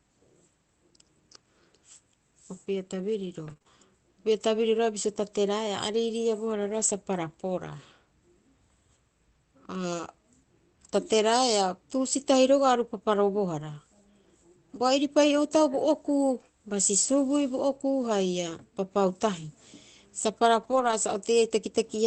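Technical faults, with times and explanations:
3.45–5.95 s, scattered short gaps: about three brief holes, longest around 30 ms, were patched by extending the preceding sound, leaving small ticks and smears.
20.63–20.93 s, lost packets rebuilt from error correction: about 160 ms was decoded from low-bitrate backup copies carried in later packets, so there is no gap, but this stretch sounds rougher and noisier.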